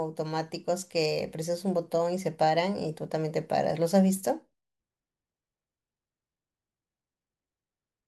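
No technical faults can be heard at any point in the speech. There is nothing in the audio to place on a timeline or explain.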